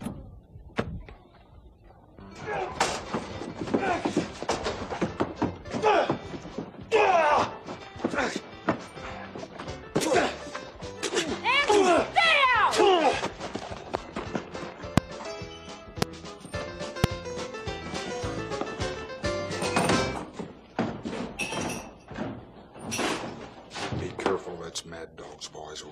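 A voltage step, likely from a switch, plug contact or driver glitch, is entering the signal path. It produces a loud pop at 14.98 s, 16.02 s and 17.04 s, each a brief thump roughly 25 dB above the surrounding sound, which carries on underneath.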